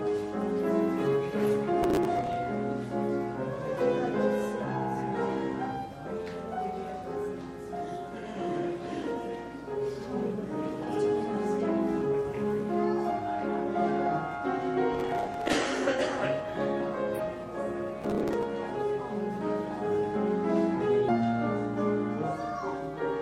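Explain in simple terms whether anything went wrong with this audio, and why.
Processor overload crackle shows up three times: 1.83 to 2.36 s, 14.95 to 15.53 s, and 18.02 to 18.43 s. The computer handling the sound fell behind and kept missing its deadlines for the small chunks it processes, which sound to be around 10 ms each. Each missed chunk was filled with a stale scrap of earlier audio, so 15 to 30 hard-edged repeats in a row create a gritty tearing over the sound. It stops once the load eases.

Damaged data in a compressed stream causes two brief glitches, at 17.14 to 17.20 s and 21.04 to 21.09 s. In each case part of the compressed data was corrupted, so the decoder could not read it properly. It lost its place and had to search for the next valid point. The result is a short chirp or blip lasting about a twentieth of a second.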